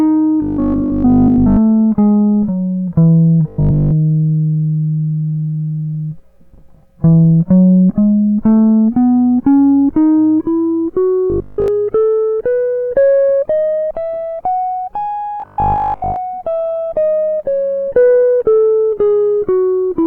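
Audio was likely arriving too slowly, so playback kept looping the last 20 ms of the buffer in place of fresh material, creating robotic sound from repeated short buffers. A rigid 50 Hz metallic buzz overlays the music from 0.42 to 1.58 s, 3.48 to 3.92 s, 11.3 to 11.68 s and 15.4 to 16.16 s. The second and third stretches repeat throughout, while the first and last repeat through most of their length.

From 16.37 s to the end, the adaptive stream switched to a lower bitrate, consistent with a step down from about 64 to 32 kbit/s Opus. The music continues with no gap, but the quality changes abruptly, and coding artefacts become more noticeable.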